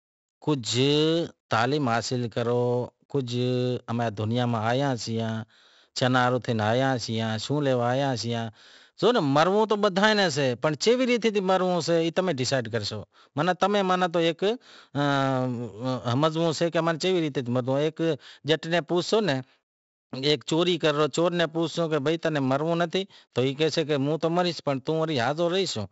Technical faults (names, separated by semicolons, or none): 4-bit ADPCM compression